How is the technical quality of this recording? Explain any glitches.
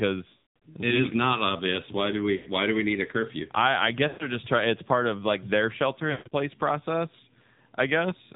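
Quality is poor: the speech has passed through a low-rate narrowband mobile codec and has four dropout glitches.

The AMR narrowband mobile codec damage is plainly audible throughout. The voice sounds buzzy and synthetic, which fits a low AMR-NB mode around 7.4 kbps, where a vocal-tract model excited by sparse pulses stands in for the real waveform. A spectrogram shows nothing above 4 kHz.

Lost AMR speech frames cause four dropouts: 0.30–0.63 s (before "it we is not"), 2.36–2.48 s, 4.08–4.36 s (after "a curfew I I") and 6.12–6.33 s (after "of like their shelter"). When corrupted frames are discarded, the decoder repeats its last pitch and filter settings at decreasing gain. In the longest stretch, about 260 ms of audio goes missing over 320 ms, including one 200 ms run. These gaps sound smeared and fading, and the speech resumes roughly. On a waveform they look like tapering envelopes, and on a spectrogram they appear as frozen, blurred harmonics.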